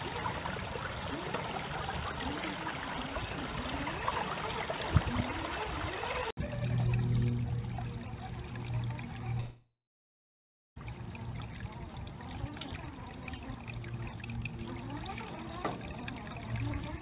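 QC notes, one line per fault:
9.40–10.82 s, long network dropout: about 1.4 s of sound never arrives. The receiver stretches the last bit into a buzzy tail that fades within roughly a third of a second, then it's near-silence for about a second before the audio picks up again past the gap. That's most likely lost packets on the call path, which here sounds like a G.711-style phone band with nothing above 4 kHz.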